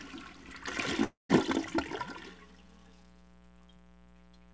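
A steady, raspy buzz runs under the sound from start to finish, sitting roughly 25 dB below it. This is mains buzz at 60 Hz: sharp switching spikes from a dimmer, rectifier or unshielded line leak in twice per mains cycle, and their harmonics stack up from 60 Hz into the kilohertz range. Because the whole clip is band-limited with nothing above 8 kHz, as the G.722 call path allows, the buzz's upper harmonics stop there too.

From 1.04 to 1.31 s the sound breaks off. The last moment is stretched into a fading buzzy hiss, then gives way to about 140 ms of near silence before the audio resumes further along, with roughly a quarter of a second of material simply gone. This is most likely a long network dropout. No packets arrived for that stretch, so the receiver concealed the gap for about 250 ms by extending the last sound, ran out of anything plausible to extend, and skipped the missing audio when the stream returned.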